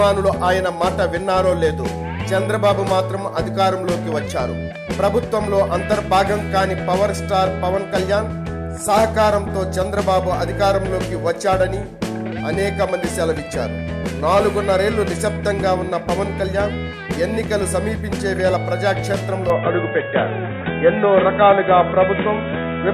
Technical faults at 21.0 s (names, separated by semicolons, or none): input switched to a poorer device